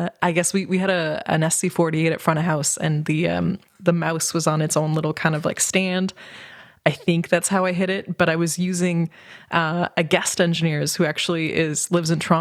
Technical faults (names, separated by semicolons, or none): none